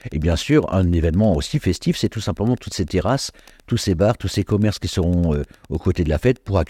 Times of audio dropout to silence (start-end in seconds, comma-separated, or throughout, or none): none